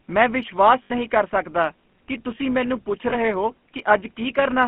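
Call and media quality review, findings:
Steady buzz at about 188 Hz under the whole recording, rising and falling with the speech level. Likely cause: filter restarted on every block. The filter state is cleared at each block boundary, so every block opens with a small transient. At this repeat rate that fits a 256-sample block.

Buzzy, gravelly roughness on all speech. Band limited to roughly 150 Hz to 3.4 kHz, with nothing above. This is the GSM full-rate codec at about 13 kbps. Its vocal-tract model, driven by a thinned pulse excitation, leaves this grainy texture, and the damage is plainly audible.

Metallic, ringing hold from 0.84 to 0.91 s, between "ਮੈਂ ਵਿਸ਼ਵਾਸ" and "ਕਰ ਸਕਦਾ ਕਿ ਤੁਸੀਂ". Lost GSM frames. The decoder repeats the last good frame for about 60 ms, consistent with three consecutive frames lost.

Shorter ring of the same kind from 3.10 to 3.14 s, just after "ਕਿ ਤੁਸੀਂ ਮੈਨੂੰ ਪੁੱਛ". 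Lost GSM frame. About 20 ms of concealment, pointing to one lost frame.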